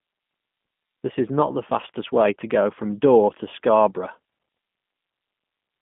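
Throughout, a G.729 codec rebuilds the speech from a filter model and sparse pulses, leaving it plainly rough and synthetic, with nothing above 3.6 kHz.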